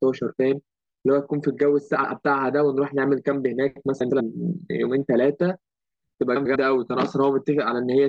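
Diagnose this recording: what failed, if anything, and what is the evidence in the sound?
Frames out of order, somewhere between network delivery and the decoder. At 1.96 to 2.12 s, 4.00 to 4.21 s and 6.36 to 6.56 s the speech flutters and garbles because two neighbouring runs of frames, each about 72 ms long at the first spot and 96 ms at the other two, play swapped. No time goes missing.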